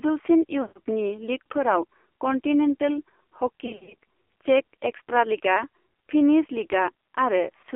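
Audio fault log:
throughout: AMR narrowband mobile codec. The audio is confined to roughly 300 Hz to 3.4 kHz with nothing above 4 kHz. The vocal-tract model, driven by sparse pulses, leaves speech heavily buzzy and synthetic, which fits a low mode near 5.9 kbps.
0.62–0.80 s and 3.66–3.94 s: lost AMR speech frames. The first loss is a solid 140 ms gap where the decoder repeats the last pitch and filter settings at falling gain, so the speech drags out and fades. The second is about 180 ms of losses spread over 320 ms, with the longest run about 60 ms, giving repeated dips and warbles.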